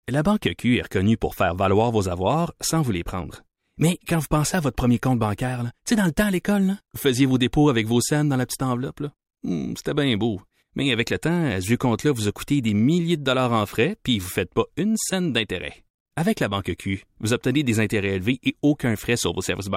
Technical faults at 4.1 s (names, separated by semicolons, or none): none